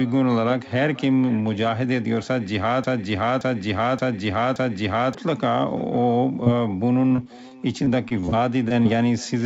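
Throughout the speech, every phrase is trailed by a faint, thinner copy arriving roughly half a second later, about 23 dB below the direct sound. This is echo with no canceller: the far end's loudspeaker fed its microphone, and that pickup returned across the network uncorrected.

From 2.84 s to 5.15 s, a broken-record loop takes over. A fragment of about 0.57 s repeats back to back, four times, with no new speech getting through. The likely cause is a stalled player or stream that kept resending the last chunk it held, losing the audio meant for that span.

Between 6.44 s and 6.48 s, a brief smear passes over the sound. This is short concealed packet loss. Roughly 20 ms of audio never arrived in time, and the decoder bridged the hole by extending the preceding sound before blending back into the real signal.

From 7.08 s to 8.87 s, the speech turns choppy as repeated packet loss sets in. 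Eleven short holes, none longer than 20 ms, are each patched by stretching the last sound. Together they cover around 11% of that stretch, leaving pieces missing.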